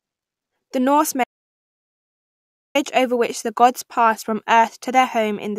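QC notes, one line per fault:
1.24–2.75 s: audio dropout to silence. The speech cuts to silence for about 1.51 s, with no room tone left, resuming on "over which the gods". The input was likely lost mid-recording.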